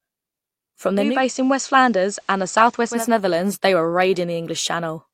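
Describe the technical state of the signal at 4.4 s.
At 4.4 s the speech signal is intact, with no audible technical fault at that moment.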